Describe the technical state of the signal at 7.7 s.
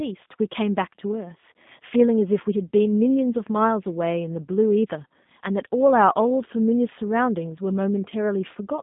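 At 7.7 s the speech is still passing through the G.729 codec that governs the whole clip, a low-rate coder that fits 8 kbit/s. Rather than carrying the waveform, it sends a vocal tract filter, a pitch predictor and a few pulses per frame, and the receiver rebuilds speech from them. The line band runs from 150 Hz to 3.6 kHz, with nothing above 3.7 kHz, so the voice sounds muffled and plainly rough and synthetic.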